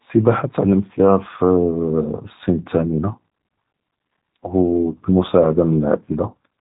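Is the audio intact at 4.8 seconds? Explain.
No. At 4.8 seconds, as across the whole clip, the speech carries G.729 codec damage that is plainly audible. The codec rebuilds each short frame from a vocal tract model, a pitch predictor and a few coded pulses, so the voice sounds rough and slightly synthetic, and nothing passes above 3.8 kHz. The result fits an 8 kbit/s codec. A simple low-pass filter would dull the sound just as much but stay smooth, without this grainy, buzzy texture.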